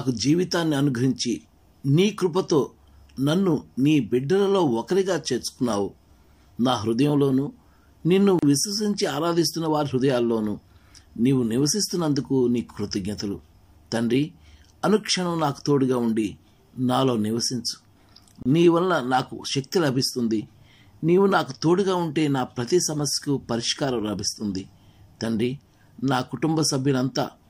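At 8.39 s and again at 18.43 s there's a gap at a join of encoded pieces, about 35 ms then 31 ms of silence, ten seconds apart. Separately encoded chunks were butted together untrimmed, so encoder delay and padding leave a smeared dropout before the sound picks up where it left off.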